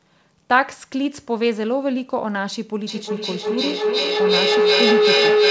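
Speech carried over a call link whose band stops at 8 kHz, consistent with G.722 at 64 kbps, develops a feedback howl from 2.87 s to the end at 5.51 s. A tone near 400 Hz swells to about 5 dB above the speech, with the loop repeating roughly every 400 ms, as the microphone-to-loudspeaker loop between two devices in one room re-amplifies itself on each pass.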